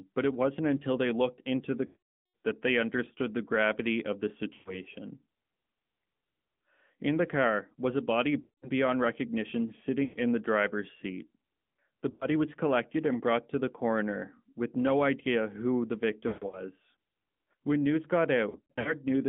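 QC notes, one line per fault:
throughout: AMR narrowband mobile codec, speech confined to roughly 150 Hz to 3.4 kHz with a plainly buzzy, synthetic texture, which fits a mid-rate setting near 10.2 kbps; unlike plain band-limiting, the voice itself sounds modelled.
1.86–2.34 s, 4.54–4.75 s, 8.40–8.70 s, 10.04–10.18 s, 12.10–12.26 s, 16.28–16.64 s, 18.50–18.95 s: lost AMR speech frames. The decoder stretches the last good pitch and vocal-tract settings while fading them, so you hear a smeared, drawn-out tail rather than a hard gap, with a weak, rough return. The longest span, 480 ms at 1.86 s, fades fully to silence. The last two spans are broken, patchy warbles spread over 240 ms and 360 ms.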